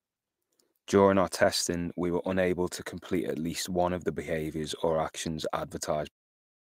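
Clock drift between sender and receiver runs throughout the speech. The sender's clock is about 2% slow, so the receiver's buffer keeps draining and needs constant topping up. From 0.38 s to 6.59 s, repeated timing corrections repeat short pieces to compensate. They add around 150 ms in total and play at effectively 98% speed, heard as faint hiccups and a slightly dragging tempo. In the waveform and spectrogram they show as small duplicated slivers at uneven intervals, continuing through the smooth fade-out that finishes at 6.14 s.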